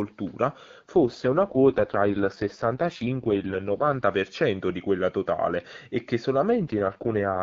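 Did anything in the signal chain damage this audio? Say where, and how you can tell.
Yes, the codec stage under link adaptation. There's an AMR rate drop from 0.96 to 4.04 s, and again from 6.50 s, right after "quella totale e che", to 7.41 s. The speech goes rough, raspy and synthetic with no gap and no change in bandwidth. That points to the AMR-WB stream falling from its clean 23.85 kbit/s mode to about 6.6 kbit/s, so more of the bits are spent on error protection on a weak radio link.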